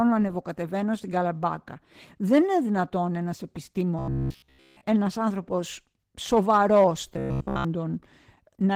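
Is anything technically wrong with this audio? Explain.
Yes. Throughout the clip, the speech sounds hoarse and faintly robotic, with a muffled quality. This is Opus voice compression at 16 kbps in hybrid mode, working in 20 ms frames. The SILK linear-prediction coder handles the lower band, and a CELT layer covers content above 8 kHz. At such a low rate both layers are coded coarsely, so the excitation detail is lost. The damage is plainly audible.

From 3.99 to 4.81 s, just before "ένας άνθρωπος σοβαρός", the speech turns into a rigid, metallic buzz pitched at 66.8 Hz. It loosely tracks the speech but no longer sounds natural. This is robotic sound from repeated short buffers. The likely cause is that fresh audio stopped arriving, so the player kept replaying its last chunk while the real signal was skipped. A buzz at 66.8 Hz fits a buffer of about 15 ms, and essentially the whole stretch is repetition.

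The same buzz returns from 7.14 to 7.65 s, right after "ένας άνθρωπος σοβαρός", again at 66.8 Hz. Here most of the stretch, roughly 70 percent, is repeated, so some genuine sound slips through between the looped fragments.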